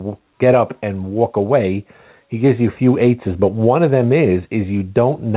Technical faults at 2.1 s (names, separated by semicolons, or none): gain pumping